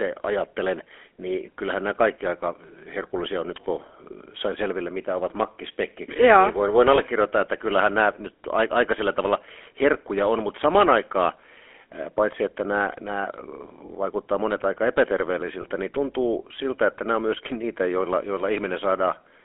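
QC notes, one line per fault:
throughout: GSM full-rate codec. A pulse-excited vocal-tract model, which fits a 13 kbps GSM stream, on a line band of 300 Hz–3.4 kHz, adds plainly audible buzzy, gravelly roughness.
6.96–7.00 s, 13.86–13.89 s, 15.62–15.65 s: lost GSM frames. Each time one 20 ms frame went missing and the last good frame was replayed, leaving a brief rough, metallic ring.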